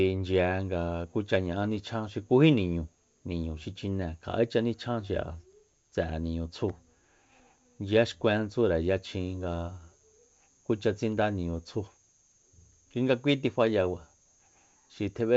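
No technical faults can be heard in the speech, which carries the wideband character of G.722 telephone coding at 64 kbit/s, extending up to about 7 kHz with at most a faint trace of the coding itself.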